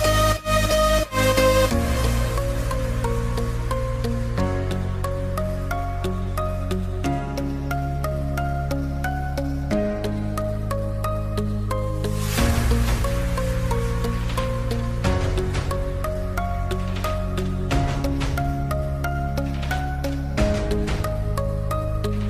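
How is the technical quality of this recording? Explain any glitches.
There's one glitch worth flagging. From 7.70 to 9.48 s there's crude rate conversion: the audio was taken from 44.1 kHz to 48 kHz by simply repeating the nearest samples, with no filtering. That leaves a patterned error, roughly 30 dB down, heard as a gritty, inharmonic fizz on the louder, brighter parts.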